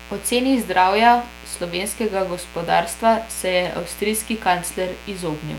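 A dimmer, rectifier or unshielded cable has let switching spikes from a 60 Hz supply into the signal path, producing mains buzz across the whole recording. Its harmonics stack up into a steady, raspy buzz sitting roughly 20 dB below the speech.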